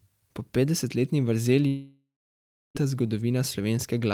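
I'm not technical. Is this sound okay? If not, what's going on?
No. From about 1.67 to 2.77 s the speech cuts out for roughly a second. The last sound trails off as a fading buzz or hiss, then there is about 0.65 s of near silence. This is likely a long network dropout, and that stretch of speech is lost.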